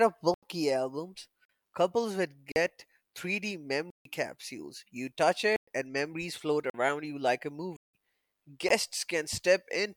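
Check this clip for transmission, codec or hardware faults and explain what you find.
The speech drops out to digital silence eight times, at 0.34–0.43, 1.45–1.49 (just before "couples would"), 2.52–2.56, 3.90–4.05, 5.56–5.68, 6.70–6.74, 7.77–7.94 (after "you like a") and 8.69 s. The first one comes right before "albums couples would". Each is a block of digital silence, likely where the output buffer wasn't filled in time and zeros went out instead. The gaps run from about 19 to 171 ms, and the 43, 85 and 171 ms ones fit power-of-two buffer sizes. The cut-outs have no fade, so the short ones sound like pops and the long ones like holes in the speech.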